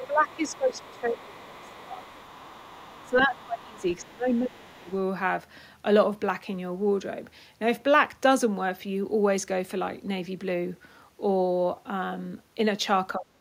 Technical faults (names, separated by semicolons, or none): speech suppressed in double talk; other side's voice leaking through